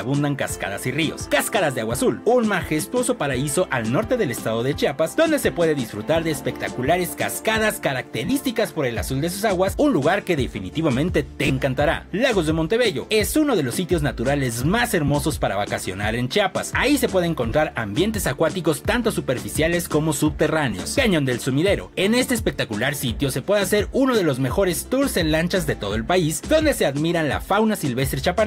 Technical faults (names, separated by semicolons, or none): lost LE Audio frames